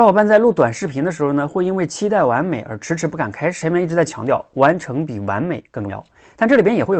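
Speech carried over a call path whose sound stops near 8 kHz, which fits Opus at around 32 kbps. At 3.61 to 3.63 s the talk lurches forward with no gap, as about a second of audio is simply gone. This is a skip ahead: a stretch was dropped, on the way or by the jitter buffer, while later packets were already queued, splicing both sides almost directly. From 3.71 to 6.93 s the speech sounds hurried yet keeps its pitch, running at 113% speed. This jitter buffer speed-up comes from the receiver repeatedly trimming pitch-period slices, about 0.4 s in all, to shrink its excess delay.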